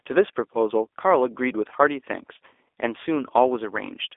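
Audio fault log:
Throughout: G.729 codec. Speech is confined to 300 Hz–3.6 kHz, nothing above 3.7 kHz, with a rough, synthetic buzz from sparse-pulse rebuilding, unlike clean band-limiting.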